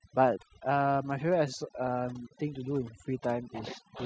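Overdone noise removal runs throughout: an overly aggressive denoiser switches off frequency bands near its noise estimate, leaving twinkling specks in near-silence.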